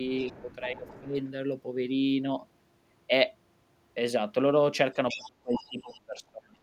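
From 0.14 to 1.01 s the other side's voice leaks through faintly, about 25 dB below the speech, likely loudspeaker echo that the echo canceller failed to remove. Between 0.23 and 1.17 s the speech is suppressed in double talk. It dips by up to about 15 dB over roughly 0.4 s in total, likely because the canceller turned both voices down while both sides talked. From 4.93 to 6.62 s the suppression deepens to about 30 dB and covers roughly 1.5 s. Within that span, from 5.08 to 5.96 s, the leaking voice returns much more prominently, about 10 dB below the speech.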